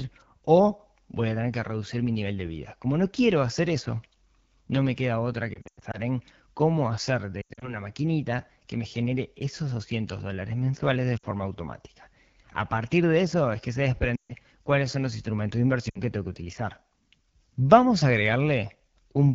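Speech, carried through the AMR wideband (HD Voice) codec at a low rate throughout. The whole clip sounds rough and raspy, which fits the 8.85 kbit/s mode. At that rate the speech model and the noise-filled top band cannot hold detail. Lost AMR speech frames cause five breaks. The decoder repeats the last good settings with falling gain, so the sound drops to near silence. The first break is at 5.54 to 5.98 s, after "no me queda otra", with about 200 ms lost across 400 ms. The second is at 7.42 to 7.77 s, before "maquinita que me genere", with about 140 ms lost. Shorter dips follow at 11.18 s and 14.16 to 14.33 s. The last is at 15.89 to 16.00 s, after "son los instrumentos de".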